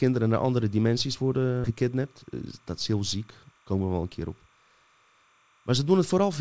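Timecode bleed runs under the whole clip. A faint chirping warble sits about 40 dB below the speech. It flips between two pitches near 1 and 2 kHz. Linear timecode from a nearby track or cable has leaked in. Its rhythm fits 29.97 frames per second.

A skip ahead comes at 1.64 to 1.66 s, right after "naar andere dimensies". Playback jumps forward with no gap. Roughly 0.7 s of speech is gone. The audio before and after the jump is butted straight together. The cause was dropped audio while later audio was already waiting.

A jitter buffer speed-up follows from 3.51 to 4.58 s, just after "dat is heel ziek". The speech runs at 114% speed but keeps its pitch. It sounds hurried. The buffer held too much audio. The receiver trimmed short pitch-period pieces, about 150 ms in total, to catch up. The call codec's band limit is audible throughout, with nothing above 8 kHz, which points to G.722.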